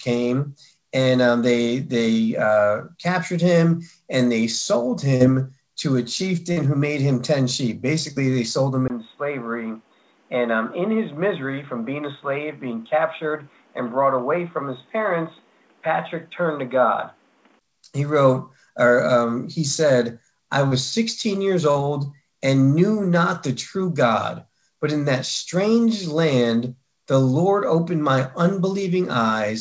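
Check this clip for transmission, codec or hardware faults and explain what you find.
Two faults are audible, a series of brief packet dropouts and a stretch where the input device changes, heard through a wideband call path whose top end stops near 8 kHz, consistent with G.722.

Short concealed packet loss at 5.16, 6.52, 8.12, 20.68 and 21.71 s: about 40 ms of packets arrived too late, and the receiver extrapolated the preceding sound, leaving a brief smear or wobble.

Input switched to a poorer device from 8.88 to 17.61 s, likely a change to a narrower-band microphone. A 20 ms gap marks the switch. Audio then turns dull above 3.8 kHz, about 5 dB quieter, with new background hiss.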